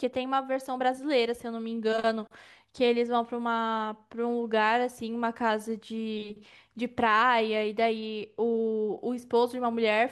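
From 7.98 s to 8.98 s the speech turns dull, losing its top-end sparkle. This is channel delay (comb filtering): one channel runs a couple of samples late, and mono summing cancels frequencies in a notch around 10 kHz.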